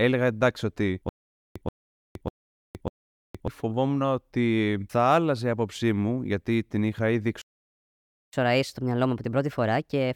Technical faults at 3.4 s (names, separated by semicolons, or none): stutter with silent gaps